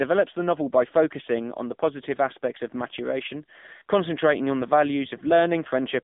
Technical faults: AMR narrowband mobile codec

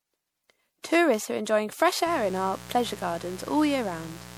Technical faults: generation loss; mains buzz

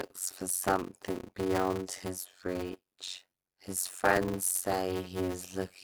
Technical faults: block size mismatch (padded)

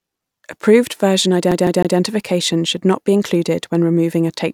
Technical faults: CD stuck on one turn

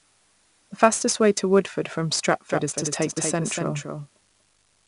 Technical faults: 4-bit ADPCM compression; doubled audio track

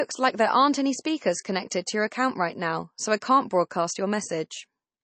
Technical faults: MP3 compression; pre-echo

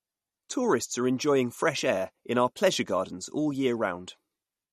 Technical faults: MP3 compression

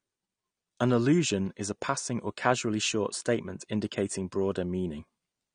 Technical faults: AAC compression

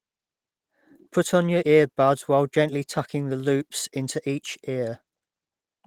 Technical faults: none

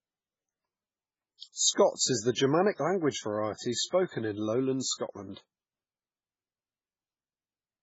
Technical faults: MP3 compression; pre-echo

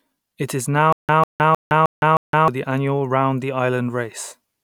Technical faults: stutter with silent gaps

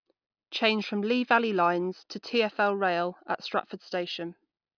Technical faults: none

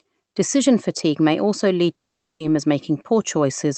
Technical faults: long network dropout

